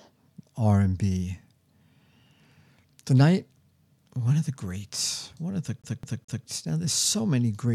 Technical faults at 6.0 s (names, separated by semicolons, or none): CD stuck on one turn